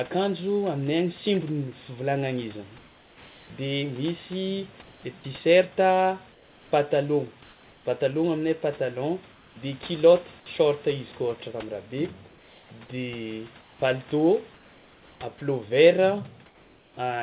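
Speech over a call line, with nothing above 4 kHz. In seven pauses, comfort noise replaces the background: 4.82–5.03, 6.32–6.71, 9.32–9.56, 12.29–12.71, 13.61–13.82, 14.54–15.2 and 16.46–16.97 s. The room sound becomes a steady, featureless hiss, about 2 to 3 dB quieter. Likely cause: the sender's voice detector halting transmission, with the receiver synthesising noise.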